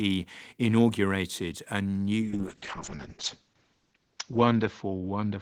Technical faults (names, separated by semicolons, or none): call bitrate drop